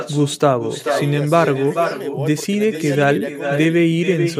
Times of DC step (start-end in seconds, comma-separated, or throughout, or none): none